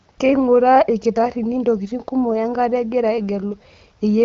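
No technical faults occur anywhere in the speech, which is carried over an AMR wideband (HD Voice) link at 12.65 kbit/s with nothing above 7.4 kHz.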